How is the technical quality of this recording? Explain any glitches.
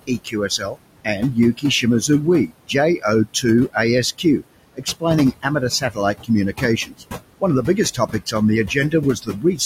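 The recording is marked by heavy noise suppression. It acts on the whole clip and repeatedly eats into the speech.

Noise suppressor artifacts run throughout. The suppressor cuts bands it judges to be steady noise by about 21 dB. The room noise, about 13 dB below the speech, sinks between words and rises beneath them.

Speech cut by the noise suppressor occurs in five stretches: 0.07 to 2.09 s, 2.47 to 3.76 s, 4.75 to 7.04 s, 7.4 to 8.34 s and 8.68 to 9.6 s. The suppressor mistakes quiet speech for noise. It lowers it by about 13 to 21 dB. Soft consonants, word endings or a quiet phrase sound swallowed or faint.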